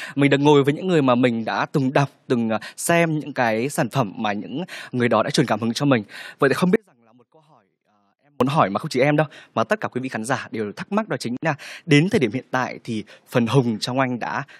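At 6.76 s the speech drops out for about 1.65 s until 8.41 s, leaving only a faint residue some 40 dB down: an audio dropout, likely a lost signal on a still-live path. Then at 11.37 s there's a 59 ms gap at a join of encoded pieces, where untrimmed encoder delay and padding leave a short silence with smeared edges.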